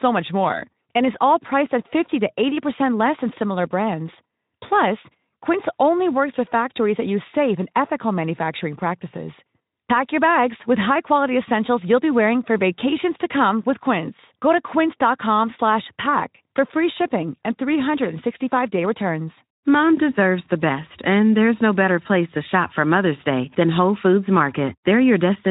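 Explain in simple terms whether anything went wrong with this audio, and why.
Nothing went wrong with this speech recording. It has passed through the Speex codec, a speech compressor from older internet calling and game chat, and at this setting it leaves only a light trace on the sound.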